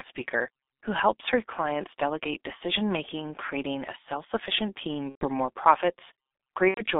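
Throughout, the speech carries the sound of the G.723.1 codec. Nothing passes below about 250 Hz or above 3.6 kHz, and the heavy low-rate coding, consistent with roughly 6.3 kbit/s, leaves the voice muffled and hoarse with smeared consonants from its slowly updated model.

VoIP packet loss concealed by the speech codec occurs at 5.09 to 5.28 s, just after "creating a self sufficient", and again at 6.68 to 6.85 s. The decoder extends its last pitch and filter, so the audio turns into a fading buzzy tone or coloured noise. The gaps point to about four and three lost 30 ms frames.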